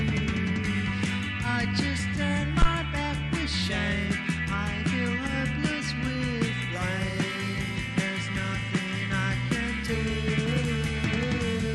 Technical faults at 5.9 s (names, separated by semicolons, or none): none